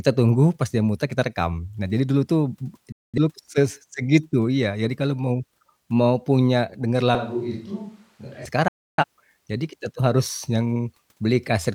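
A speech recording with two digital broadcast dropouts and one stretch where the pickup changes. The receiver lost valid frames at 2.92 s and again at 8.68 s and muted until good data resumed. Each time the speech snaps to silence within a few milliseconds, for about 0.27 s and then about 0.36 s, and the missing audio never returns. The longer gap fits two more frames lost than the first. Between 7.15 and 8.45 s the close microphone's signal was likely dropped in favour of a switch to a distant microphone. The speech abruptly turns hollow and roomy, thinner in the bass and a few decibels quieter, with faint room noise underneath. It jumps back just as suddenly at the end of that span.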